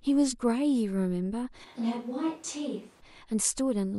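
From 1.66 to 3.0 s the speech abruptly turns hollow, roomy and about 5 dB quieter, with more room noise, likely from a switch to a distant microphone.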